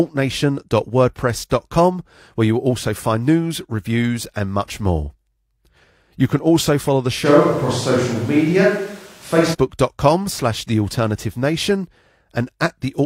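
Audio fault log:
7.27–9.53 s: switch to a distant microphone, likely a far pickup replacing the close one; speech abruptly turns roomy, hollow and thin, level steady, room noise roughly 30 dB down.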